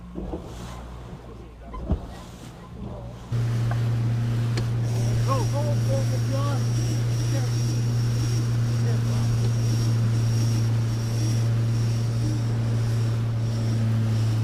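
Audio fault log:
No faults are heard, and the signal stays continuous and stable across the whole clip.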